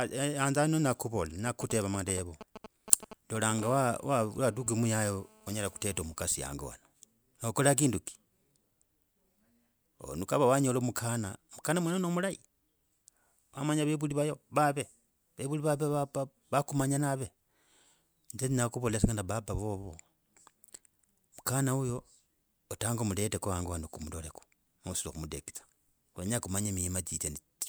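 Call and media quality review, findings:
GSM signalling bursts, 1.47–3.60 s, right after "yana nya kuvola". Galloping ticks and short 217 Hz buzz groups, roughly 10 dB under speech. Nearby 2G handset signalling. Audio circuit rectifies the radio bursts.

GSM phone buzz, 3.62–6.01 s, ending before "mukhasi hango wanje". Steady, raspy 217 Hz buzz with many harmonics, about 24 dB below speech. Nearby 2G handset now in a call. Its continuous transmit bursts are rectified into audio.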